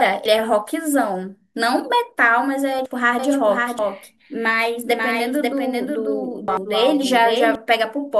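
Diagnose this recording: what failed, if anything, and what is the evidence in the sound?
The speech jumps forward four times: at 0.26 to 0.54 s, 2.77 to 2.86 s, 3.79 to 3.88 s and 6.48 to 6.57 s. Roughly a tenth of a second goes missing at the first two, about two tenths at the third and about four tenths at the last. These are compressed frames skipped at the codec stage. Whole frames were missing or rejected by the decoder as damaged, so playback leapt ahead.

From 3.19 s to 7.55 s a second full-band copy of the speech runs about half a second behind the first, a few dB quieter. It has no reverberant tail or room colouring, and it begins and ends abruptly, which marks it as a doubled audio track rather than an acoustic echo. The fixed lag and clean copy most likely come from the audio being captured a second time through a slower path in the call-processing or routing chain.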